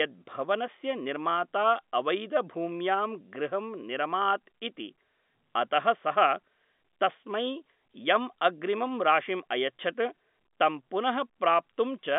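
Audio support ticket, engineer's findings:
No faults found; the signal is consistent with G.711 A-law telephone coding at 64 kbps, with the line band running roughly 200 Hz to 3.6 kHz and nothing above 3.8 kHz.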